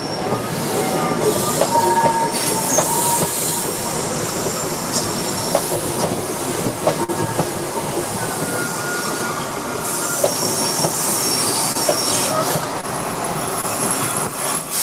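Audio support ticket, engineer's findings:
Burst of packet loss at 7.04 to 7.10 s. About 40 ms of audio missing. Receiver extended the last sound for 46 ms, fading it. Held buzz or hiss, then the audio resumes further on with a jump.

Short concealed packet loss at 11.72 to 11.77 s, 12.81 to 12.85 s and 13.61 to 13.65 s. About 20 ms missing each time. The decoder filled about 20 to 25 ms by extrapolation, then blended back. Brief smear or wobble.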